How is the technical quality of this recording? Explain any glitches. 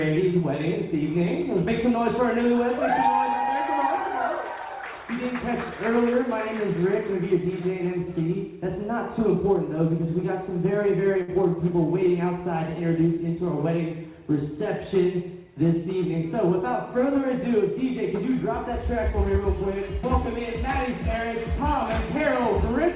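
The audio has one glitch. It runs through a call connection whose sound stops at 4 kHz, which fits a G.711 A-law codec at 64 kbps.

From 11.22 to 11.30 s the last sound is briefly held and fades, and then the audio jumps ahead. This is a burst of packet loss. The receiver stretched and faded the last sound for about 57 ms, then resumed with roughly 60 ms of audio simply gone.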